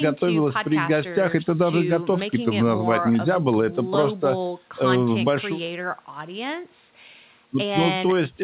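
Nothing stood out on listening to this speech; the call path behaves as a narrowband phone link should, with no content above 4 kHz.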